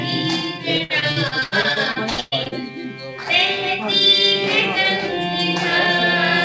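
Repeated packet loss (robotic sound) runs from 0.78 to 2.54 s: the audio breaks up into a rapid series of holes, the longest about 119 ms. Each is patched by stretching the preceding sound, so about a third of that stretch turns choppy. The clip is audio carried over a call connection, with nothing above 8 kHz, which fits a wideband call codec such as G.722.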